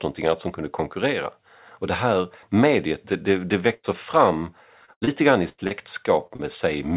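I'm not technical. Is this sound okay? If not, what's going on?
No. Burst of packet loss at 3.74, 4.94 and 5.49 s: about a tenth of a second of speech never arrived, so the last sound stretches into a fading buzz or hiss, then jumps ahead. Short concealed packet loss at 4.85, 5.05, 5.67, 6.27 and 6.36 s: roughly 30 ms gaps patched by continuing the previous sound, heard as brief smears or wobbles. The call itself, using a G.711 A-law codec, keeps nothing above 4 kHz, which gives the usual muffled phone sound.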